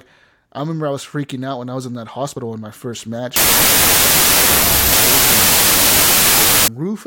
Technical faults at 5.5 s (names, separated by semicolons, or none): wrong sample width